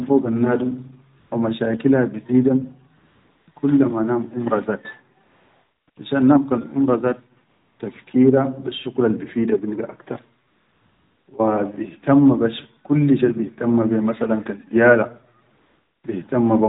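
AMR comfort noise fills the pauses at 1.20–1.32, 2.98–3.48, 3.52–3.56, 5.24–5.88, 5.90–5.96, 7.50–7.80, 10.48–11.28 and 15.54–16.04 s. The phone stopped sending speech frames there, and the receiver generated a steady, smooth noise in place of the real background, so each gap switches in and out abruptly. On a spectrogram these stretches show as flat, featureless bands cut off at 4 kHz by the narrowband codec. The waveform shows a uniform low hiss with hard edges.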